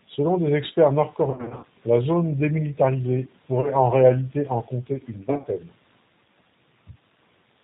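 Throughout, the speech sounds slightly rough and synthetic, with nothing above 4 kHz. This is the G.729 codec at 8 kbit/s, which rebuilds each 10 ms frame from a vocal-tract filter, a pitch predictor and a few pulses, and its damage is plainly audible.

From 1.31 to 1.65 s, after "des experts", the sound smears into fading fragments. This is VoIP packet loss concealed by the speech codec: about 210 ms was missing, scattered over 320 ms in runs up to 50 ms, and the decoder extrapolated its last pitch and filter. Shorter smears follow at 3.61 to 3.74 s, before "en réalité en compter", with 30 ms lost, and at 5.30 to 5.47 s, after "réalité en compter une", with 80 ms lost across 140 ms.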